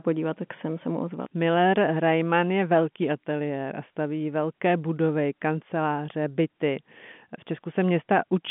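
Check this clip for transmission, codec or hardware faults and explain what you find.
Nothing wrong found: the speech sits in the narrow band of G.711 telephone coding, roughly 150 Hz to 3.5 kHz with nothing above about 3.8 kHz, which fits 64 kbps A-law, and any codec roughness is faint at most.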